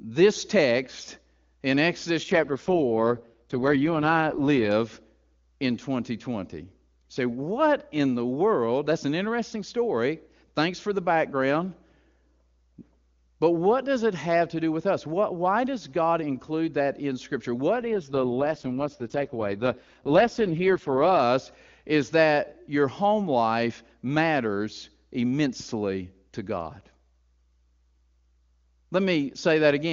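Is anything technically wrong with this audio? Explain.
Yes. There are two AMR rate drops, from 2.23 to 4.72 s and from 17.81 to 21.20 s. In each, the speech turns rougher and more synthetic, then returns to the clean AMR-WB sound. The bandwidth stays the same and nothing drops out. The sound fits a fall from the codec's top rate of about 23.85 kbit/s to its lowest, 6.6 kbit/s. That is a network adapting to a weak radio link, spending bits on error protection rather than on the speech itself.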